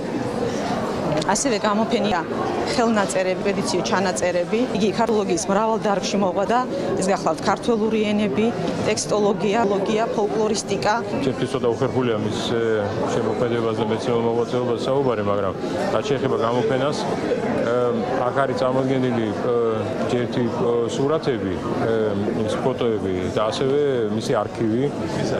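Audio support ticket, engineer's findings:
Compressed frames skipped at 2.12, 3.42, 5.09, 6.48 and 9.64 s. The sound jumps forward about 0.2 to 0.5 s each time, in whole steps of the 92.9 ms frame length. Decoder dropping missing or damaged frames.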